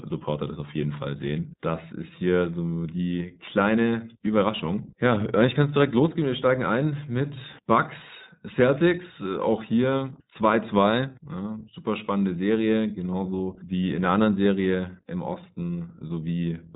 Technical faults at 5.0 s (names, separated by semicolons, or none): iLBC codec